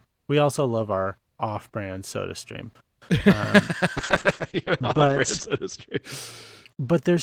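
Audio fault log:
3.99–6.73 s, call bitrate drop: the call's bandwidth estimate fell and the encoder was pushed to far fewer bits, consistent with a fall from around 32 kbps to about 9 kbps. Coding grows coarse and the audio band narrows from 20 kHz to 8 kHz, so the speech turns dull, muffled and watery. The coarsest stretch lasts about 1.4 s before the bitrate recovers and the top end returns.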